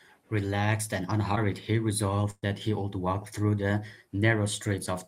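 At 1.35 to 1.38 s there is a short concealed packet loss: about 20 ms of speech arrived too late to decode, and the receiver bridged the hole by extending the preceding sound before blending back, leaving a brief smear in the speech.

At 2.30 to 2.48 s a burst of packet loss removes about 120 ms of speech. The receiver extends the last sound for roughly 118 ms while fading it down, followed by about 20 ms of silence, then speech resumes with the intervening portion missing.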